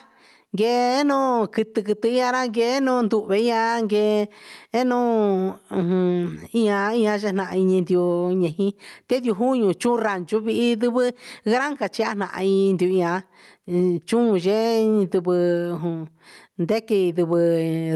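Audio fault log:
throughout, gain pumping: the level ducks by about 15 dB under each loud syllable, likely from excessive mic gain driving a fast limiter.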